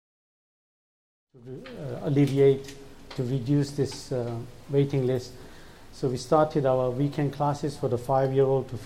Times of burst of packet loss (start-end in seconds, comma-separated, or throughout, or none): none